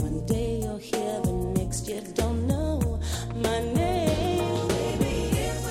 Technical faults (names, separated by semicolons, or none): none